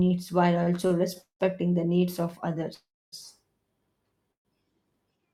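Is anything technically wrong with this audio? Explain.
Yes. From 0.63 to 1.42 s there are repeated stalls (stutter): four brief gaps, the longest 185 ms, where late packets left the jitter buffer empty and the last sound was stretched to fill about a third of that span. The audio drags in short, repeated hitches rather than one pause.

Call audio freezes occur at 2.74 to 3.14 s and 4.32 to 4.47 s. Each is a single pause, 381 ms and 127 ms long and mostly silent, before the sound resumes where it stopped. The likely cause is delayed packets draining the buffer.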